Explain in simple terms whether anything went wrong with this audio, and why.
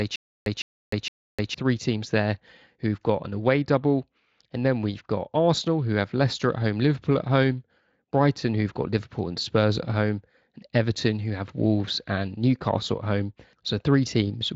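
From the very start until about 1.54 s there is a stutter with silent gaps. A short burst of speech, about 0.16 s long, repeats three times, each followed by about 0.3 s of dead silence. The playback likely stalled and kept replaying its last fragment, so the speech meant for that stretch is missing.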